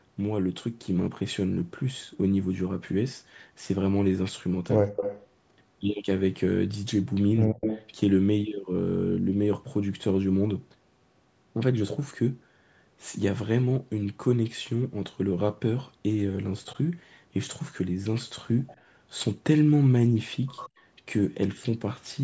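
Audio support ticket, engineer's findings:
Speech suppressed in double talk, 4.82–4.91 s: brief deep dip of around 40 dB, a hole in the waveform and spectrogram; likely echo canceller ducking during overlapping talk.

Echo leak at 4.96–5.25, 7.61–7.9, 18.67–18.75 and 20.56–20.69 s: copy trailing by 99 ms, about 5 to 25 dB down, a ghost smear on the spectrogram; likely loudspeaker residue passing the canceller.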